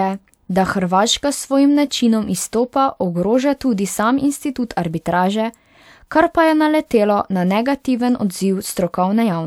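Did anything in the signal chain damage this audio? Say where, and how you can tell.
No, nothing in the signal chain damaged this speech.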